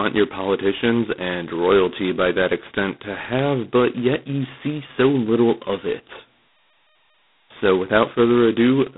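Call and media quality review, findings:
G.726 ADPCM, throughout. Harsh rasping hiss riding speech level, rising and falling with it. Band limited to roughly 150 Hz to 3.6 kHz, nothing above 3.9 kHz. Heavy damage fits 16 kbit/s mode: 2-bit prediction differences, coarse quantisation noise.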